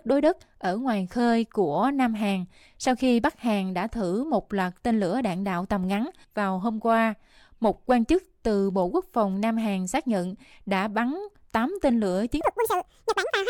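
A section at the wrong speed runs from 12.41 s to the end of the clip, just after "tên lửa". Here the speech suddenly plays at twice its recorded speed, so it rushes by in half the time and jumps up in pitch by nearly an octave, giving a squeaky, chipmunk-like quality. Because speed and pitch shift together, the likely cause is this last segment being played back against a clock running double the correct rate.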